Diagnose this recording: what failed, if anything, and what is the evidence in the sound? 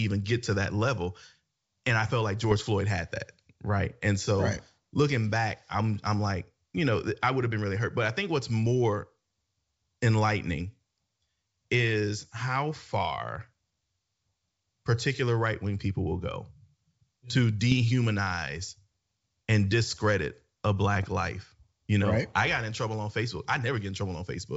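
Bit errors on an ADPCM link, a transmission-stage fault, cause pops and rough bursts at 2.44 to 2.65 s, 17.72 to 17.74 s and 20.94 to 21.06 s. A low error rate corrupts the decoder's step size and predictor. Each hit rings briefly, with level jumps, through otherwise clear 64 kbit/s G.722.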